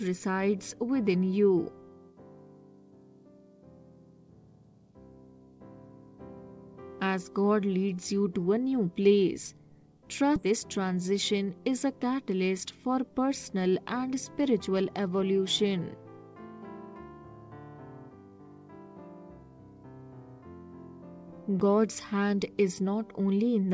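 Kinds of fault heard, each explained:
skip ahead: The jitter buffer dropped a stretch of queued audio, so at 10.36 s playback jumps forward with no gap, losing roughly 0.7 s.
jitter buffer speed-up: The jitter buffer held excess audio and trimmed pitch-period slices, so from 10.96 to 11.60 s the sound runs 8% faster at unchanged pitch.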